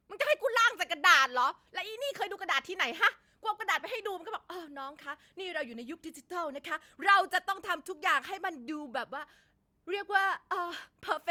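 No audible technical faults in the speech recording at any point.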